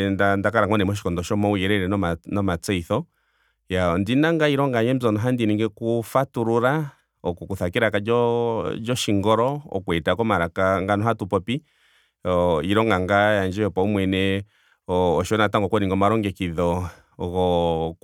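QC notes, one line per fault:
No faults found on listening.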